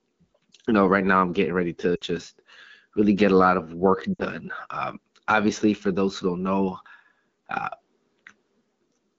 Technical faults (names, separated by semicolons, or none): lost AMR speech frames